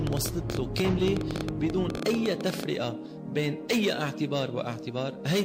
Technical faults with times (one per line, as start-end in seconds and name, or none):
0.07-2.64 train of clicks